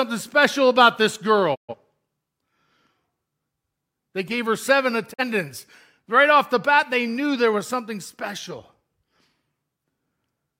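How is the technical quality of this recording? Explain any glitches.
The speech cuts out twice in brief, clean silences caused by digital broadcast dropout. At 1.54 s the sound fades away over about 20 ms and stays muted until 1.75 s. At 5.12 s a shorter hole opens, and the sound returns at 5.23 s. In each case the receiver stopped getting decodable frames and muted its output until valid ones arrived. The audio sent during those gaps, roughly 128 ms and 43 ms, is lost rather than delayed, which fits about three frames and one frame of the broadcast stream.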